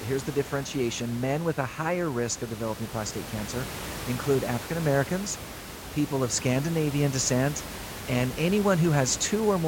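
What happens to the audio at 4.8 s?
Nothing goes wrong at 4.8 s: the speech there is intact, with only the room's own background noise audible about 12 dB beneath it as part of the recording.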